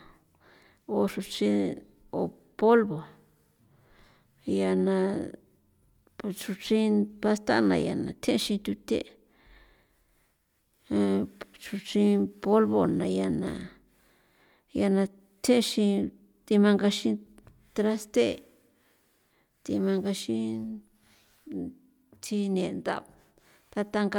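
No technical faults can be heard anywhere in the speech recording, and the signal holds steady throughout.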